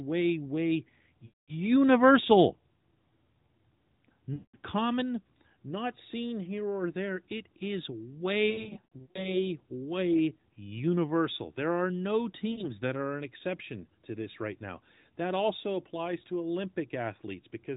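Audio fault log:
1.26–1.54 s, 4.34–4.56 s (before "common not seen here"), 8.50–9.39 s (scattered, after "or there it is") and 12.52–12.67 s (after "are no"), lost AMR speech frames: frames failed their checksum, so the AMR-NB decoder repeated the last good pitch and vocal tract settings at falling gain. The sound smears and fades, then returns weak or rough.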